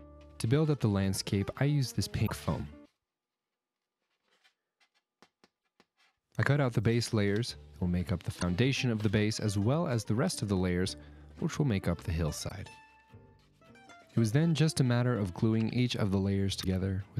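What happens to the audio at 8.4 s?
Damaged data in a compressed stream, 8.37 to 8.43 s: corrupted frames make the decoder lose sync, causing a brief glitch, seen as a broadband vertical smear on the spectrogram.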